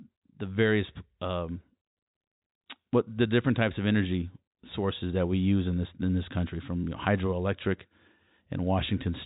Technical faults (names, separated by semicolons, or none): none